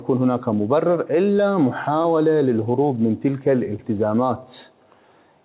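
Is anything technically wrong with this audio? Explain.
Yes. There is short concealed packet loss at 2.02 to 2.06 s and again at 3.76 to 3.80 s. Each time about 20 ms of audio failed to arrive in time, and the receiver invented a replacement by extending the last sound, pitched or noise-like as appropriate, then faded back into the real signal. Each gap comes across as a brief smear or small wobble, and a short transient can go missing. The telephone-band sound, with nothing above 4 kHz, fits the G.711 A-law call path.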